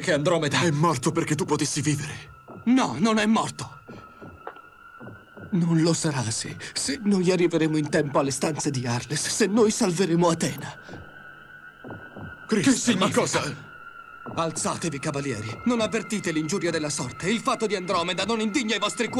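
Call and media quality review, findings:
Likely electrical switching spike from a nearby switch, motor or discharge coupling into the line: sharp snap at 10.58 s, brief and fairly quiet, around -30 dBFS peak.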